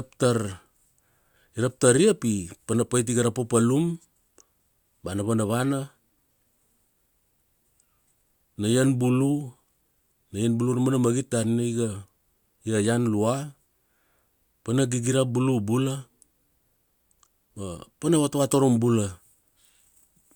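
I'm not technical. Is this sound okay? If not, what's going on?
Yes, no faults to hear.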